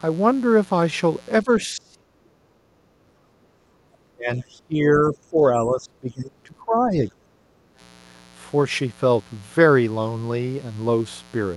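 Mains buzz at 60 Hz runs through the whole of this speech recording at about 25 dB below the signal. It is a steady, raspy tone because sharp switching spikes, picked up twice per mains cycle from a dimmer, rectifier or unshielded lead, spread harmonics up into the kilohertz range. Speech suppressed in double talk occurs from 1.43 to 3.11 s, 4.14 to 5.37 s and 5.53 to 7.26 s, where the voice dips, falling by around 35 dB in the first stretch and around 20 dB in the later two. The likely cause is an echo canceller that could not tell the local talker from loudspeaker echo while both sides spoke, and so attenuated both. Background gated by the echo canceller appears at 3.39 to 3.86 s and 7.54 to 7.78 s. Here the room sound briefly sinks by about 14 dB and about 13 dB, as the canceller clamps the microphone during loudspeaker playback and then releases it.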